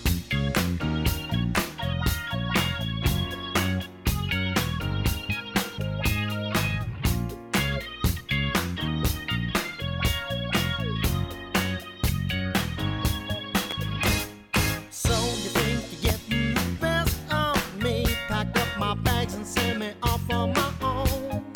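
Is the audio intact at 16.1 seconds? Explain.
No. At 16.09 to 16.12 s there is a loud pop. The likely cause is a sudden voltage step or pulse, from a plug, a switch, static discharge or a driver glitch, entering the signal path, with the downstream circuitry shaping it into a brief transient. The result is a single sharp pop lasting about 30 ms, peaking roughly 15 dB above the surrounding audio, while the underlying sound continues beneath it uninterrupted.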